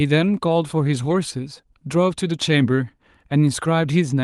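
No technical faults are audible in the speech, which comes through a normally working WebRTC call path whose high end stops at 12 kHz, consistent with Opus at around 32 kbps.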